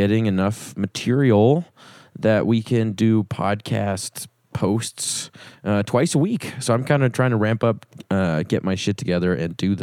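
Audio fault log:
No faults detected anywhere in the speech.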